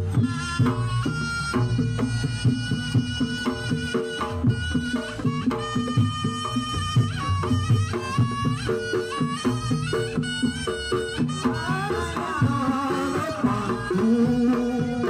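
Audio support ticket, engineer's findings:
No audible faults found; nothing to report.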